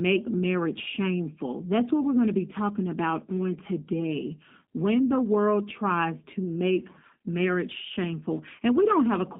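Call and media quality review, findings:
Speech rough and slightly synthetic start to finish, band about 200 Hz to 3.6 kHz. Sounds like G.729 codec at 8 kbit/s; pulse-based excitation rebuilding speech frame by frame.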